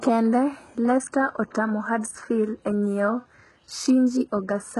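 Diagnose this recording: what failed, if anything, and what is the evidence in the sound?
The codec stage failed, and the likely culprit is HE-AAC compression at a very low bitrate, something around 12 kbps. Throughout the speech the damage is heavy. The upper range sounds bright but synthetic, and s sounds come out gritty and metallic, with nothing at all above 11.5 kHz. Spectral band replication copies lower bands upward under a coarse envelope. That rebuilt, misaligned treble is what separates this from a plain low-pass filter, which would sound dull rather than falsely bright.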